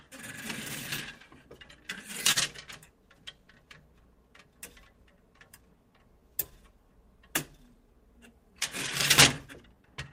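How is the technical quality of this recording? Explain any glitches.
The recording has timing faults: a steady clock mismatch, ongoing small corrections, and one brief stall.

Clock drift between sender and receiver affects the whole clip. The sender's clock runs roughly 3 percent slow, so the receiver's buffer keeps draining. Unlike a single network hiccup, this never settles; it causes small irregular timing slips that recur throughout rather than at one moment.

Repeated timing corrections run from 1.30 s to 9.96 s. To cover the slower sender, the receiver repeats short fragments, playing at about 98 percent speed and adding roughly 200 ms overall. They sound like faint stutters and a slightly dragging, uneven pace. Unlike a stall, nothing is frozen; the slips are spread out and all lengthen the audio.

A short stall from a late packet occurs at 2.32 s to 2.38 s. A packet arrived late, the buffer ran dry, and the receiver held the last sound for 40 ms before resuming where it left off. 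Nothing is lost. What marks it out is a single held moment instead of a scattered pattern.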